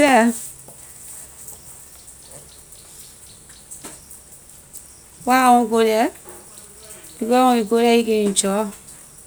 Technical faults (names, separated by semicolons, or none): none